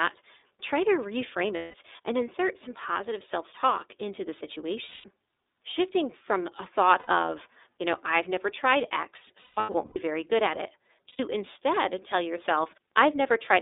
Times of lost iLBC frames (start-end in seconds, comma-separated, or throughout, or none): 1.56-1.74, 4.85-5.04, 6.99-7.08, 9.42-9.98, 11.09-11.20